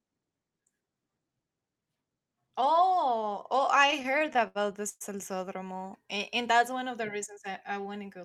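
Speech with repeated stalls (stutter) from 3.81 to 5.03 s, right after "oh oh": late packets drained the jitter buffer about a dozen times, and the receiver stretched the last sound, up to 115 ms, filling roughly a quarter of that span. A spectrogram shows smeared, repeated frames; the waveform shows fading, echoing segments.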